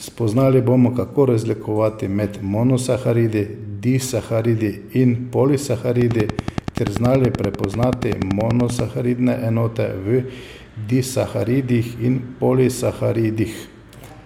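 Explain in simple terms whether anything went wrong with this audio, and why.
Something did go wrong: from about 6.01 to 8.80 seconds there is a train of clicks, roughly thirty sharp ticks at a steady 10.4 per second, standing out well above the speech. They keep going in the gaps between words, so they aren't part of the talking. Unlike random crackle or one stray pop, these clicks sound alike and keep an even beat. That points to a likely cause in electrical interference or a faulty connection or power supply.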